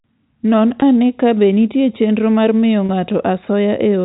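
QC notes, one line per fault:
0.80–0.82 s and 2.86–2.89 s, packet loss with pitch repetition: two brief held, slightly buzzy moments, the first just before "ane kabe nitie chenro", the second right after "nitie chenro mar miyo". Gaps of about 20 ms and 30 ms, which fits two and then three 10 ms packets dropping, were bridged by repeating the last pitch period. Both gaps are short enough that the sound never fades to silence, and the narrow telephone band of the G.711 coding carries them faithfully.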